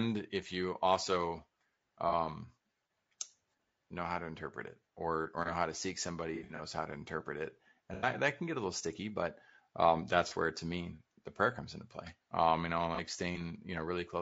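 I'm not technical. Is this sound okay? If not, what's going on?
No. Two problems can be heard in this speech.

Low-delay AAC compression runs through the whole clip: the voice sounds rough and grainy, with a hiss sitting between the tones of the voice and a thin, slightly artificial top end. This is likely from the low-delay audio format used on video calls. It chops sound into very short slices to keep the delay down, and when it has too little data to work with, fine detail in the voice gets blurred into noise.

AAC frame loss with concealment causes five brief glitches. The first is at 2.09 to 2.14 s, and the second is a scattered run at 6.35 to 6.61 s, between "know how to seek" and "how to interpret it". The others come at 7.94 to 8.08 s, before "that can get a", at 10.28 to 10.33 s, between "little sticky but um" and "where to me the", and at 12.95 to 13.00 s. Small chunks of audio went missing in transit, and the player patched each gap by guessing from the sound just before, so each spot comes out as a short smeared, noisy blur.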